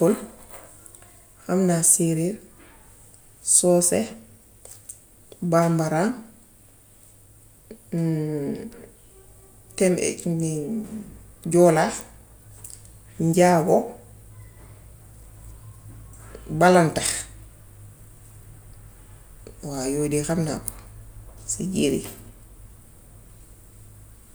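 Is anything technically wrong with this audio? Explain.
No, nothing technically wrong stands out in this speech recording, so there's nothing here to flag.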